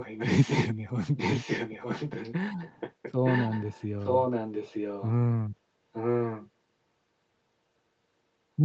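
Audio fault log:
0–0.68, 1.17–2.34, 2.62–3.85, 4.01–5.12 and 5.93–6.49 s: echo leak. A fainter copy of the speech returns 0.92 s late, roughly 10 dB down (quieter from 2.62 to 3.85 s), likely from loudspeaker pickup the far end's echo canceller missed. On a spectrogram, the harmonic patterns repeat faintly, shifted right by 0.92 s.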